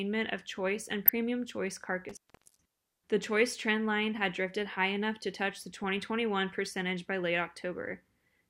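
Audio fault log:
0.92–1.09 s and 5.84–5.98 s, DAB burbling: right after "of choice", and again after "enough to touch the" before "percentage by late", the sound breaks into short blips of noise with sub-bands jumping in level. Weak reception lets bit errors slip past error correction into the MP2 data, so individual sub-bands jump in level frame by frame. The error rate is likely a small fraction of a percent.
2.09–2.66 s, intermittent contact: the sound drops out for about 0.42 s, with crackle as it breaks and returns and faint hiss in the gap. A loose plug or cable opened the signal path momentarily, and the scraping contact at each edge produced the crackle.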